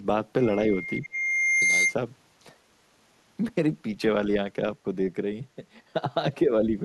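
From 0.41 s to 1.96 s a loudspeaker feedback squeal rises out of the speech. A single tone at 2.1 kHz swells over roughly a second and a half until it sits a little above the speech level. The microphone was picking up the loudspeaker it fed, and at that one frequency the loop gain passed unity, so the tone fed on itself. Its fixed pitch and steady growth set it apart from background noise or an electrical whine, which would not swell like this.

From 1.00 s to 1.15 s, during the squeal, the speech drops sharply, by well over 20 dB at its lowest. A shallower dip of only a few decibels follows from 6.46 s to 6.52 s. Both are likely speech suppressed in double talk: the echo canceller could not separate the talker from incoming loudspeaker sound and turned the outgoing signal down. Unlike a dropout, these are level dips that recover, not clean gaps of silence.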